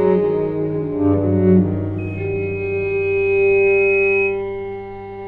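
From 1.98 s to 4.43 s a loudspeaker feedback squeal develops: the microphone re-amplifies its own speaker output at 2.5 kHz, swelling over roughly two seconds to about the programme level. A spectrogram shows a brightening horizontal line; the waveform envelope grows steadily.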